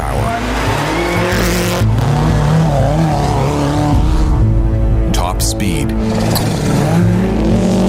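Short bursts of harsh, chirping noise cut through the audio at 1.37 to 1.42 s, 5.08 to 5.12 s, and 6.35 to 6.48 s. The first and last are the loudest, and the last lasts longest. Each is a corrupt frame decoded. Bit errors in the compressed stream were played rather than concealed, so misread gains and codes threw energy to the wrong frequencies. The burst lengths suggest a couple of damaged frames at first and several by the end.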